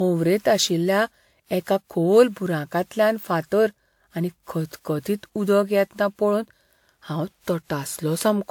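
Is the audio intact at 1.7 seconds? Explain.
No. At 1.7 seconds, as throughout the clip, the speech shows generation loss. It sounds swirly, smeared and hollow, with blurred attacks. The likely cause is about seven rounds of WMA 1 encoding at 128 kbit/s. Each pass re-quantised on a shifted frame grid, so noise built up, though content still reaches about 20.1 kHz.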